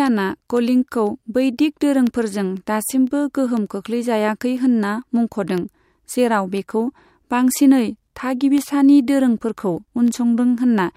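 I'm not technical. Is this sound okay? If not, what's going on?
No. Regular ticks sound every half second from 0.07 to 10.58 s: periodic USB or driver dropouts, where a background task briefly interrupts the audio and leaves tiny silent gaps.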